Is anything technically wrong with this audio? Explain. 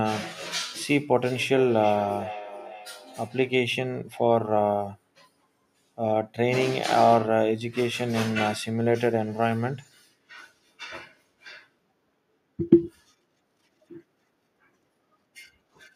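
Yes. From 1.23 to 3.59 s the speech repeats about every 400 ms, thinner and ringing, peaking about 13 dB below it: feedback echo between two devices re-capturing each other's playback.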